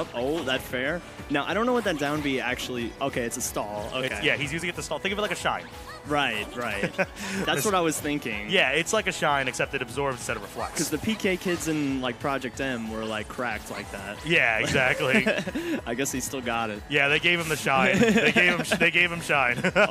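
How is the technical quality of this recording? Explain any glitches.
No glitches are audible anywhere in the recording, and there is nothing to explain.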